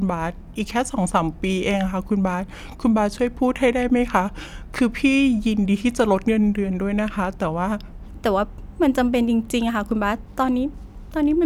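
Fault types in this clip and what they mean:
Section at the wrong speed: from the start to 8.02 s the speech runs at 0.86 times its proper rate, so it sounds slow and drawn out, with pitch dropped by about three semitones. The likely cause is playback against a mismatched clock. On a spectrogram, harmonics and formants sit lower and syllables stretch wider until 8.02 s, then jump back up. The waveform shows longer, more spread-out syllable envelopes in that section.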